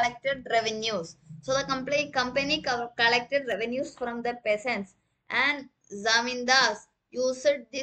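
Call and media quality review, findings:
Channel delay (comb filtering), 3.52 to 5.59 s. Hollow, phasey, dulled tone; fixed notches, the first near 5 kHz. Probable component: stereo-to-mono downmix. One channel lags by roughly 0.1 ms, which fits an offset of a few samples. The summed shared content cancels at evenly spaced frequencies, producing the comb.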